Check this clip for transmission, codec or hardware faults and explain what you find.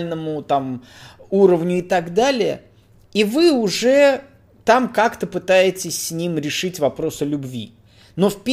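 Nothing stands out here: the speech comes through without any transmission, codec or hardware problem that a listener could pick out.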